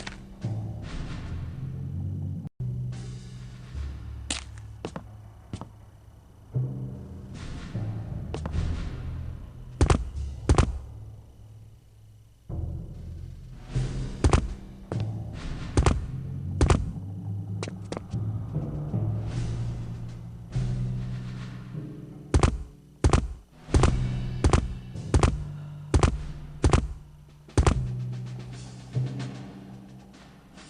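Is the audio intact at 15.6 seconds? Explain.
Yes, at 15.6 seconds the audio runs on intact, with no dropout, click, distortion or other fault at that moment.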